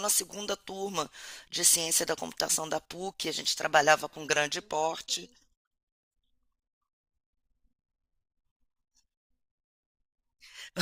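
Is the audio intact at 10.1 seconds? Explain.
Yes, the speech is intact at 10.1 seconds, with no dropout, click, distortion or other fault at that moment.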